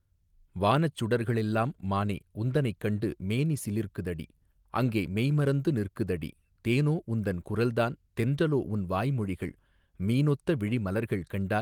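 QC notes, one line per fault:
No faults to note in these QC notes.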